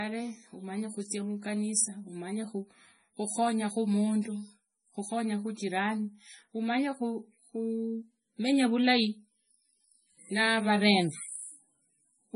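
Throughout the speech, nothing reaches above 10.5 kHz, and the remaining sound is heavily degraded: watery, swirling artefacts and smeared attacks, which is likely MP3 compression. At a low bitrate, consistent with around 24 kbps, the encoder discards weak frequency lines that flicker in and out from frame to frame and cuts the treble at a fixed point. That flickering sets it apart from a simple low-pass filter, which removes highs but leaves no swirl.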